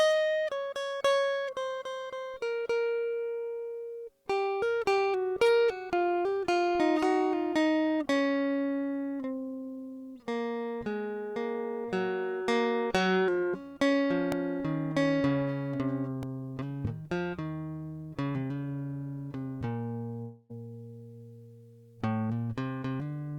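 At 14.32 s and again at 16.23 s the music gives a tiny click-like buzz, as one sliver of about 1.33 ms sounds three times over with hard joins. That is a repeated buffer: fresh audio came late, so the player replayed its last block, which fits a 64-sample buffer, and essentially nothing is lost.

From 20.22 s to 20.51 s the music gives way to a fading buzzy fill lasting about 275 ms, with no stretch of true silence, and it returns with roughly 280 ms of the music missing. This is likely a long network dropout, where no audio arrived and the receiver stretched out the last sound until the stream resumed further on.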